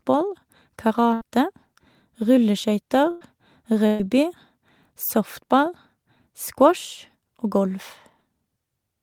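At 1.13 to 1.23 s, 3.11 to 3.23 s and 3.87 to 4.01 s the speech briefly smears into a held, fading buzz or hiss, then jumps ahead. Each is a burst of packet loss: about 80, 100 and 120 ms went missing, and the receiver stretched the last sound over the gap.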